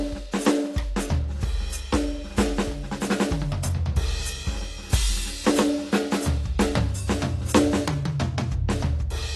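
Heavy AAC compression at a low bitrate, likely around 32 kbps, runs through the whole music clip, starving the coder of bits so it drops everything above about 12.1 kHz and thins the remaining spectrum. The damage is plainly audible: the result sounds dull and smeared, with a warbling or fizzy texture on sustained tones.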